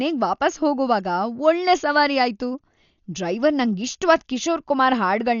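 From start to finish the speech sounds dull, with nothing above 7 kHz, and there's a rough, fluttery noise riding on the voiced tones. That's likely Dolby Digital compression under heavy strain. The encoder narrowed the band and starved many frequency lines of bits, so the decoder filled those gaps with dither noise instead of real detail. The damage is heavy enough that it points to a starved bitrate, something around 48 kbps.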